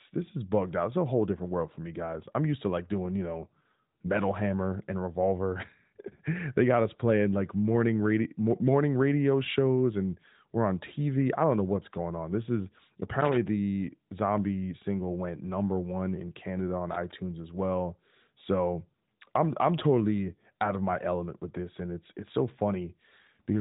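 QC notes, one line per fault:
13.20–13.37 s and 16.91–17.12 s, loose connector crackle: a worn or dirty contact in the signal path rapidly broke and remade its connection, chopping the speech on and off, heard as two irregular scratchy bursts lasting about 0.16 s and 0.2 s.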